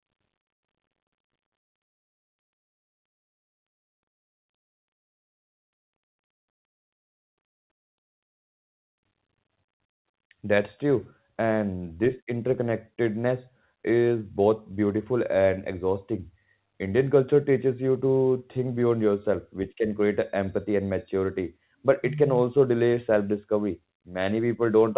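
No audible technical faults here.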